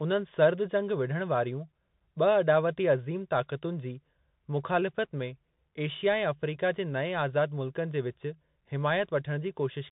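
Speech passed through a Bluetooth CVSD headset codec for its whole length: nothing reaches above about 3.8 kHz, so a spectrogram shows a hard ceiling there, s sounds turn scratchy, loud bright peaks distort as the one-bit step lags, and granular hiss lies under the speech, which fits a 64 kbps CVSD link.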